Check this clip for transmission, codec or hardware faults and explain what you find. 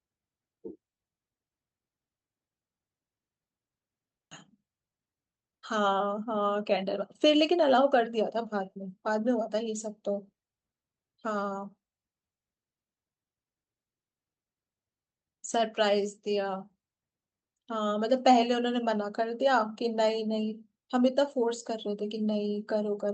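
Two transmission faults are audible.

At 4.31 s there is a skip ahead: about a second of speech was discarded while later audio waited, so playback jumps forward with no gap.

From 4.41 to 9.23 s there is a jitter buffer speed-up: the overfilled buffer trims pitch periods repeatedly, running the speech at 111% speed at unchanged pitch, noticeably hurried.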